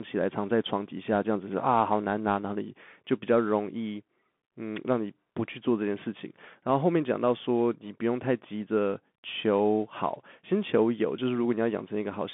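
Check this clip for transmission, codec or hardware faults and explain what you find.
One fault runs through the whole clip: Bluetooth CVSD headset codec. The speech sits within 200 Hz to 3.5 kHz, with nothing above 3.8 kHz, which fits a 64 kbps one-bit delta stream. Its adaptive step lags sharp rises, so sibilants turn scratchy over a grainy hiss.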